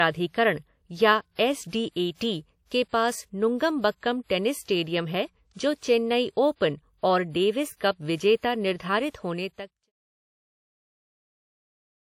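From start to finish the speech sits under a hard ceiling at 16.7 kHz. The file looks like a healthy high-rate MP3, but the band limit and the smeared, swirly top end point to low-bitrate audio saved at a high bitrate. Most likely it started as something like a 48 kbit/s WMA and was re-encoded at around 192 kbit/s. The second pass can't bring back what the first threw away, and that holds right through the smooth fade-out that closes around 9.9 s.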